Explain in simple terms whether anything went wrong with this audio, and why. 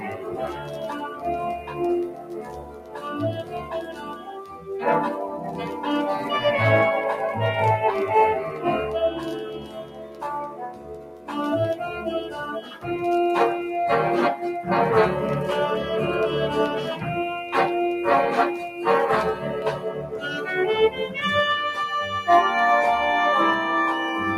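A noise suppressor built for speech was left running on material it wasn't designed for, which is the fault called noise suppressor applied to music or sounds. It treats steady tones, room ambience and fading tails as if they were background noise and turns them down, while sharp attacks slip through. Across the whole clip this makes the level swing noticeably, so the sound pumps and thins out instead of holding steady.

In particular places the suppressor pulls the sound down harder than the rest. This is sound cut by the noise suppressor. It happens at 0.0 to 1.25 s, 1.58 to 3.05 s, 3.42 to 4.7 s, 9.45 to 11.3 s, 12.22 to 12.86 s, 18.61 to 18.83 s, 19.85 to 20.47 s and 20.9 to 21.16 s. In each stretch, held or decaying sound sinks clearly in level or has its tail cut short. The longest dips, in the first five seconds and around 10 s, last a second or more.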